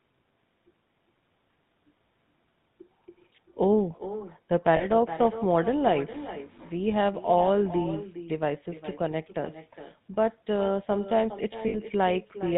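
Throughout, every phrase is shadowed roughly 0.4 s later by a quieter, thinner copy about 14 dB down. This is echo with no canceller: the far end's loudspeaker feeds its microphone and the sound returns after the network round trip. The whole clip also carries a buzzy, gravelly roughness with nothing above 4 kHz. That is the GSM full-rate codec, which models the vocal tract and drives it with sparse, regularly spaced pulses. At 4.76 s and again at 11.68 s, the speech briefly locks into a rough, metallic ring. These are lost GSM frames: the last good frame's settings are repeated, covering about 40 ms and then 60 ms.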